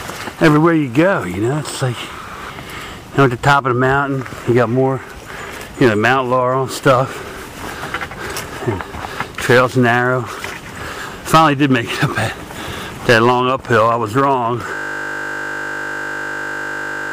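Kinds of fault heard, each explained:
System hang loop: from 14.75 s to the end, the sound collapses into a steady buzz pitched at 50 Hz, with no further change in content. A single 20 ms slice of audio repeats exactly, over and over, because the computer or its driver stopped supplying new data while the sound hardware kept replaying the same short ring buffer. A loop this brief fuses into a continuous tone at the loop rate rather than an audible stutter.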